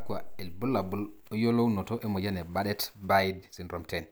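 From 1.10 s to the end, the speech suddenly runs about 1.37 times faster while its pitch stays put, sounding rushed. This is a time-stretched section, likely squeezed by software dropping short pieces. Unlike a playback-speed error, the pitch never rises.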